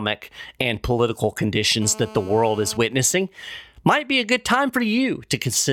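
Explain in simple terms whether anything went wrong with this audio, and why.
From 1.82 to 2.77 s, right after "and political", a hard, raspy buzz sits over the speech. This is GSM phone buzz: a 2G phone nearby was in a call, and the audio circuit picked up its radio pulses, turning them into a 217 Hz rasp.

From 2.81 to 3.77 s, just before "might be a good", a fainter pattern of even ticks with a longer buzz twice a second follows. These are GSM signalling bursts: the same phone, its user now silent, sent only brief groups of radio pulses, which the circuit turned into sound.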